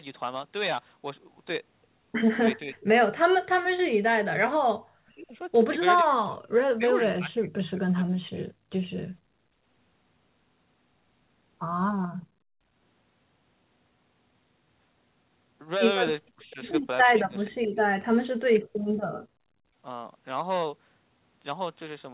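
Early on, the speech keeps getting swallowed: at 2.62–2.94, 3.49–5.39, 6.01–6.43 and 6.75–8.46 s it plunges by roughly 40 dB in chunks. That's likely speech suppressed in double talk, where the echo canceller mistook overlapping talk for echo and ducked everything. At 9.2–9.63 s the room sound drops by about 32 dB and then comes back. That's background gated by the echo canceller, which clamped the mic while the loudspeaker played. The speech suppression returns at 16.32–16.59, 17.16–17.77 and 18.08–18.76 s, with dips of roughly 35 to 40 dB.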